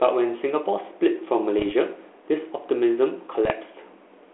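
Bit errors on an ADPCM link hit this speech clip at 1.59 to 1.72 s and again at 3.45 to 3.51 s, on a telephone-band 32 kbit/s G.726 path. Flipped bits, at about 0.5 to 0.7 percent, knock the decoder's step size and predictor off track, so each error rings on as pops, rough bursts and brief jumps in level.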